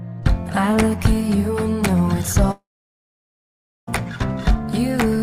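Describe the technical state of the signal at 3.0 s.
A likely long network dropout from 2.51 to 3.89 s stopped audio arriving; by 3.0 s the concealment buzz has faded, leaving silence until sound resumes with the stretch missing.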